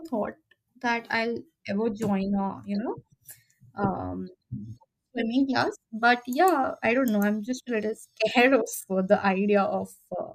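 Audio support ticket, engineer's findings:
No audible faults found in this speech recording.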